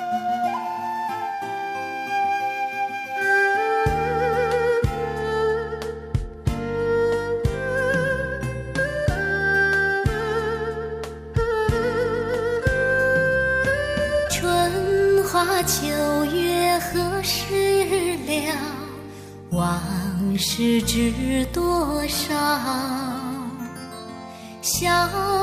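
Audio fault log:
No faults detected in this clip.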